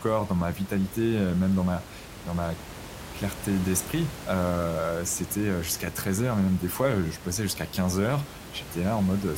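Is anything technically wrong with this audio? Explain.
No, no technical faults.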